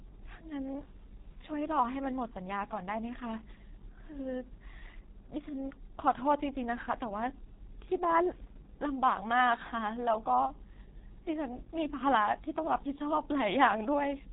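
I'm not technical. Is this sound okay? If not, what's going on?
No. The whole recording passed through the G.723.1 codec, an old low-rate phone codec. It removed everything above 3.8 kHz, leaving the speech muffled, hoarse, and blurry on consonants.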